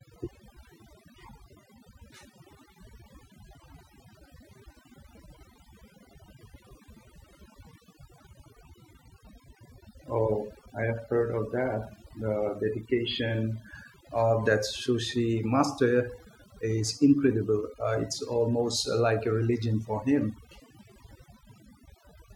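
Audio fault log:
Throughout, overdone noise removal: the background drops and breaks up into twinkling specks. A noise reducer set too hard is switching individual frequency bands off whenever they sit near its noise estimate, taking soft speech detail with them. Unlike lossy codec smearing, the gaps track the noise floor.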